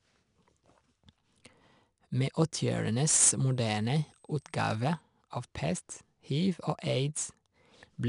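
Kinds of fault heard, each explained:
4-bit ADPCM compression: Each sample is coded as a coarse step from a prediction. This leaves gritty hiss tracking the speech throughout, with nothing above 10.6 kHz.
Switching supply whistle: A power supply's switching leaks into the audio. A faint high whistle near 8.2 to 8.26 kHz, drifting slightly, sits well below the speech from 3.01 to 5.01 s.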